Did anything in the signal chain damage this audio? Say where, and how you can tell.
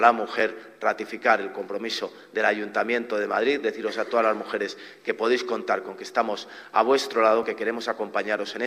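Yes. A repeated buffer fault occurred at the driver or buffer stage. Short clicks sound at 0.40 s and 7.43 s. New audio arrived late, so a 1.45 ms chunk, which fits a 64-sample buffer, replayed twice at 0.40 s and once at 7.43 s. The hard joins click.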